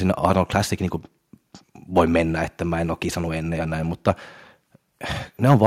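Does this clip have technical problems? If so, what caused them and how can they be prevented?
Yes. Microphone overload occurs at 0.24 to 0.4 s, at 1.98 to 2.0 s just before "mennä että mä en", at 4.08 to 4.1 s just after "kisannut ennen ja näin", and from 5.5 s to the end. At each point the loudest peaks flatten against the converter's ceiling and take on a harsh crackle. They are pushed about 2 dB too far, and about 5 dB in the final burst. The likely cause is input gain set too high. Lowering the microphone gain so that peaks stay several decibels below full scale prevents it.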